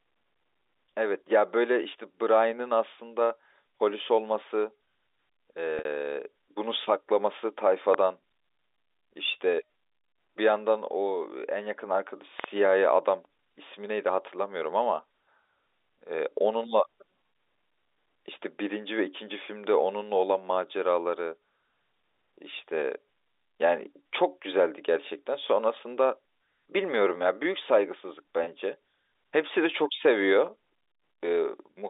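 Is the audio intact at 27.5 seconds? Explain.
Yes, at 27.5 seconds the speech is intact, with no dropout, click or other fault at that moment.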